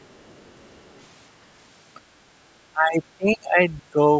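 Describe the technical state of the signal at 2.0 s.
At 2.0 s the speech is intact, with no fault present, and what can be heard of the call microphone processing is just its normal shaping: the lowest bass is trimmed away and nothing reaches above 8 kHz.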